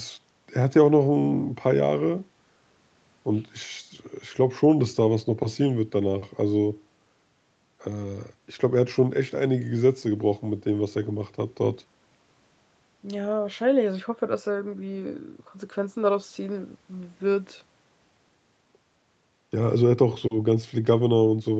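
No technical faults are audible.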